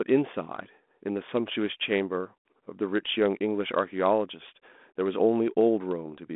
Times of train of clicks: none

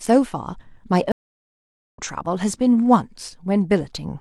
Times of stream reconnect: 1.12-1.99

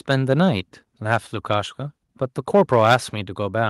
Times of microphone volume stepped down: 2.92

